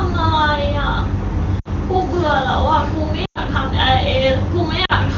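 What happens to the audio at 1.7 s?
Lost AMR speech frames: from 1.59 to 1.68 s the decoder received no usable frames, about 60 ms of audio. It filled the gap by repeating the last good pitch and vocal tract settings at falling gain, so the sound smears briefly, fades, and returns thin and rough.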